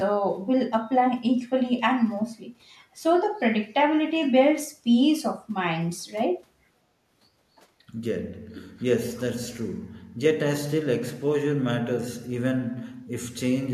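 A speech recording with a brief, very faint delayed copy of the voice from 8.79 to 8.84 s, trailing the original by about 244 ms and sitting roughly 35 dB below it. This is an echo leak, likely from a far-end loudspeaker whose echo canceller let a scrap of its microphone pickup through.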